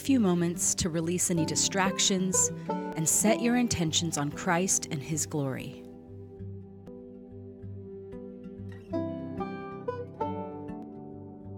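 At 2.93, 6.88 and 10.83 s the sound jumps forward, a small skip where a sliver of roughly 50 ms just isn't there, and the two sides butt straight together with no gap. Spaced about four seconds apart like that, it's likely audio missing between chunks: the recorder seems to work in 4 s blocks and drops a little each time it closes one and starts the next.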